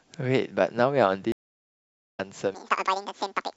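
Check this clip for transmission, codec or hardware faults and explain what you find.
Two faults stand out in this speech clip.

From 1.32 to 2.20 s the audio drops out for about 0.85 s and resumes roughly a second further on. This is a stream reconnect: the connection broke and a fresh decoder picked up the live stream later.

From 2.55 s to the end, the speech turns high and rushed, about ten semitones up. It is a section at the wrong speed, playing at 1.97 times normal, likely from a wrong clock.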